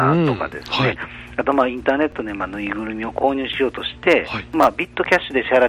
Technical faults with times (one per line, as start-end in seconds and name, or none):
2.12 repeated buffer
4.63-4.65 repeated buffer